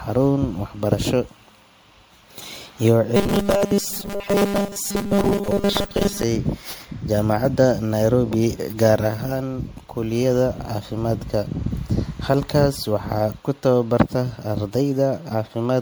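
Generation loss runs through the whole speech clip. It is likely the result of the audio being decoded and re-encoded as MP3 about seven times, at 96 kbit/s. Each pass quantises on a shifted frame grid, so the errors and spectral gaps pile up instead of staying fixed. The result is swirly, hollow and smeared, worse than 96 kbit/s alone would produce, with consonant attacks softened, even though content still reaches about 20.1 kHz.

Robotic sound from repeated short buffers appears from 3.16 s to 6.24 s. Fresh audio is likely arriving too slowly, so the playback side keeps looping a tiny slice of what it last received. For most of that stretch it replays the same fragment while the real signal goes missing. The repetition imposes a rigid 200 Hz buzz, which fits a buffer of about 5 ms. The speech turns metallic and mechanical but still roughly tracks its original rhythm.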